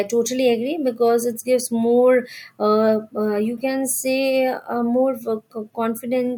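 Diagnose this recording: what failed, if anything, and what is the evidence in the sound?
Nothing in this speech recording points to a failure at any stage of the chain. No dropout, distortion, discontinuity or other defect can be heard anywhere in the audio.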